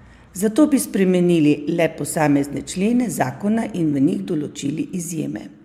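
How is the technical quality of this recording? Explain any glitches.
Listening through this speech recording, nothing stood out as a technical problem.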